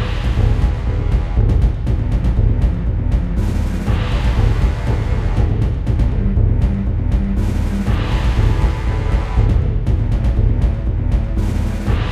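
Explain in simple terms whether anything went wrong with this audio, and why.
Nothing went wrong with this recording of sounds.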